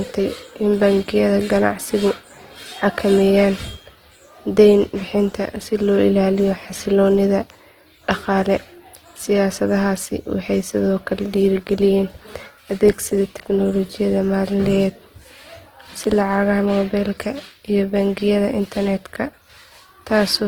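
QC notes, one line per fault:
Throughout, Opus compression: voiced speech comes out rough, grainy and noisy, plainly audible but with little swirl. That's likely the codec's music mode starved of bits, which fits about 16 kbps, filling bands with noise or folded content. Highs still reach 20.2 kHz.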